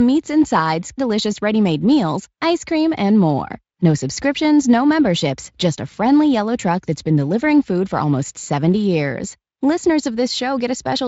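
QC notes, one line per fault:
No faults found in the speech. The Speex coding leaves only light traces, which fits a high-quality setting of around 28 kbps.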